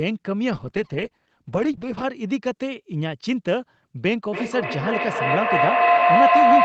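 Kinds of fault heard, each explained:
Call bitrate drop: encoding falls from 32 to 10 kbps, so the speech turns coarse and muffled for about two seconds without gaps, unlike packet loss.
Feedback howl: a tone near 700 Hz swells to about 8 dB above the speech and pulses roughly every 0.3 s, growing rather than fading like echo.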